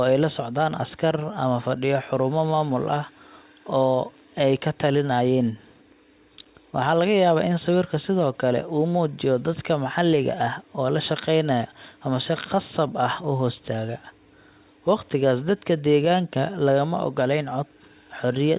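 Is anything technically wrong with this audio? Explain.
No, nothing in this speech recording points to a technical fault. It carries the sound of a call path working as designed, with nothing above 4 kHz, a narrow telephone bandwidth that fits a G.711 codec at 64 kbps.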